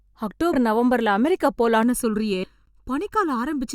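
Compressed frames skipped at 0.53 to 0.55 s: whole blocks of the coded audio never reach the output, so the speech jumps ahead by around 70 ms, which fits a few 20 ms frames lost.

Channel delay (comb filtering) from 1.83 s to the end: one channel runs less than a millisecond behind the other, and summing them to mono cancels evenly spaced frequencies starting near 700 Hz. The speech turns hollow and phasey.

Compressed frames skipped again at 2.43 to 2.49 s: this gap is larger, jumping roughly 200 ms ahead, consistent with about ten dropped 20 ms frames, and it falls inside the already hollow sound.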